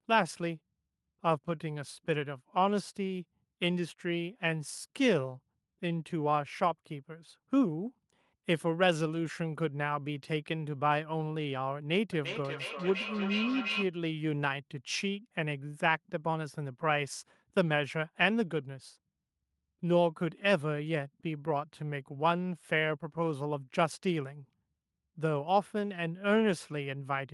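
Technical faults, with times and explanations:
12.12–13.93 s, feedback echo between two devices: the sound comes round again roughly every 0.4 s, thinner and ringier each pass, peaking about 5 dB below the speech. A second device in the room replays the call, its mic catches it, and neither echo canceller knows to remove it.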